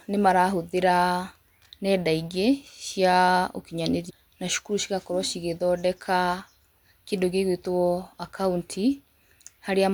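Speech that jumps abruptly forward with a small blip at 4.09 s, just before "na cukuru cigakorwo cigĩthondeka", likely a stream segment skipped, dropping part of the programme.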